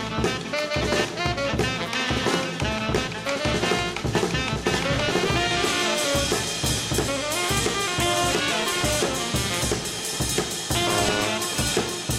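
DAB burbling occurs at 2.75 to 3.22 s, 4.96 to 5.41 s, 8.40 to 8.98 s and 10.76 to 11.47 s. Weak reception lets bit errors, well under one percent, slip past the error correction into the MP2 audio data. Corrupted samples then put short blips of noise in single sub-bands, and corrupted scale factors make sub-bands jump in level for up to a frame. Its span fits some 19 to 30 damaged frames.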